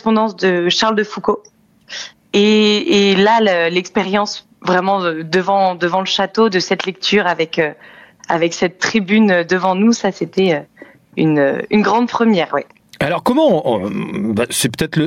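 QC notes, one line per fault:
Throughout, gain pumping: the gain swings by around 10 dB. This is likely input gain set far too high for the microphone, with a fast limiter or compressor clamping down on every peak and releasing between them. Loud and soft passages sit unnaturally close in level, so the sound comes across squashed.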